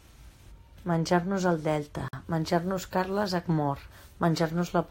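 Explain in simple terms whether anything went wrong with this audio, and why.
A gap at a join of encoded pieces appears at about 2.08 seconds, where the speech suddenly drops out for roughly 49 milliseconds, until 2.13 seconds, then picks up exactly where it left off. The audio was likely compressed in separate pieces and stuck back together without trimming. Each piece starts with a little built-in silence and ends with padding, and both were left in, so a brief hole sits right at the join.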